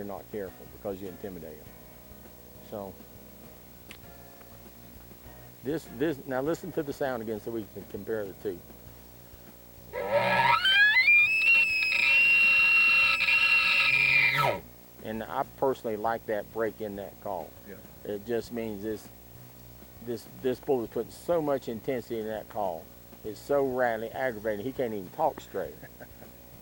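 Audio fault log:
throughout, video or display buzz: a screen or video cable is leaking in, giving a 59.94 Hz field-rate buzz with hash, a 15.7 kHz line whine, sitting roughly 25 dB under the sound.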